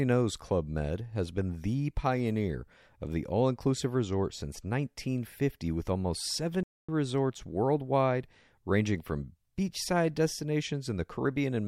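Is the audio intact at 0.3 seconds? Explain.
Yes, the audio is intact at 0.3 seconds, with no fault present at that moment.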